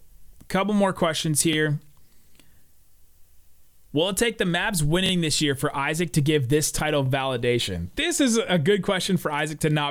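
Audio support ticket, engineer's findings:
Repeated buffer, three events. At 1.53–1.56 s, after "couple more questions": a 23 ms chunk plays twice, hard join, heard as a brief stutter. At 5.06–5.11 s, before "this year for": the same chunk plays three times, a longer stutter. At 7.06–7.08 s, after "to give this title": one repeat. The chunk length fits a 1024-sample buffer. Probable component: the playback device buffer. New audio arrived late, so the last buffer replayed. No content appears lost.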